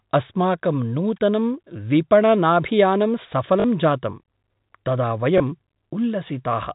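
Packet loss with last packet repeated: at 3.60 to 3.64 s, about 40 ms of data went missing, which fits two 20 ms packets. At 5.38 to 5.40 s, about 20 ms went missing, which fits one. Each time the receiver replayed the previous packet, giving a brief robotic stutter at the first and a small blip at the second, through the narrow telephone-band G.711 sound.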